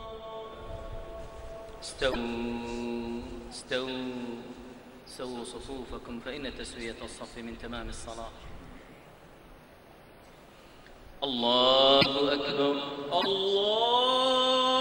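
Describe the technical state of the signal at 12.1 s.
Right around there, from 12.01 to 12.06 s, the sound breaks up for roughly 56 ms, about two frames' worth at 26.1 ms per frame, with a brief garbled glitch where the audio seems to skip ahead. The likely cause is a broken MP3 bit reservoir: once frames go missing, the next frame reaches back for borrowed data, grabs bytes from the wrong frame, and decodes junk until things resync.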